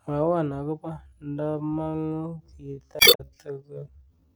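From 0.9 s to the end, a time-stretched section begins: software likely stretched this stretch of speech to about 0.53 times its original speed, repeating short pieces to hold the pitch. The pace drops abruptly to roughly half, and the slowed speech drags.

From 2.97 to 3.21 s, damaged data in a compressed stream disrupts decoding: corrupted bytes make the decoder misread frames and lose sync while hunting for the next header. This is heard as a brief glitch.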